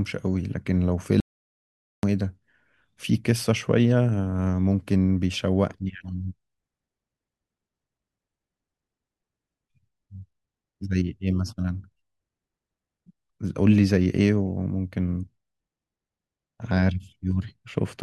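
At 1.20 s the speech cuts off mid-flow into an audio dropout to silence, returning abruptly at 2.03 s after about 0.83 s of silence. The input was likely lost briefly, through a disconnected device, a failed link or an unintended mute, while recording carried on writing empty samples. Unlike a natural pause or a noise gate closing, no room tone or breath survives in the gap, and the speech resumes mid-stream rather than at a new phrase.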